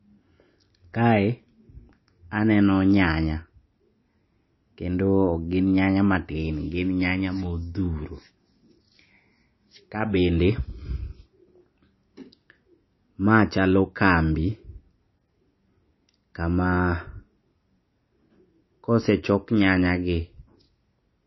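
From start to finish, the speech carries plainly audible MP3 compression damage, likely from a low-bitrate encode, which fits roughly 25 kbps. Nothing remains above 5.8 kHz, so the top end sounds dull. Weak frequency components flicker between frames, giving a watery, swirling texture.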